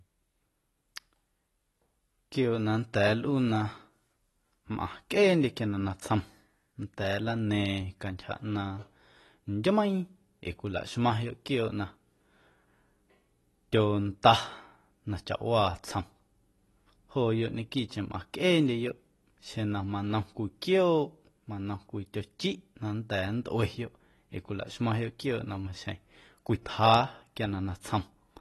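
From start to finish the speech has plainly audible AAC compression damage. Nothing comes through above about 12.1 kHz, so the top end sounds dull and closed in, and the remaining detail has that smeared, processed quality. That damage is likely from AAC-LC encoding at a low bitrate, something like 32 kbps. At that rate the encoder drops the highest band and codes what's left of the spectrum coarsely.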